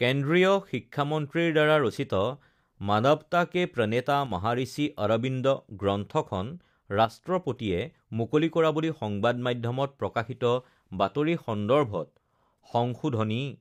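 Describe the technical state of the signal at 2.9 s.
At 2.9 s the speech signal is intact, with no dropout, clipping, distortion or other fault present at that moment.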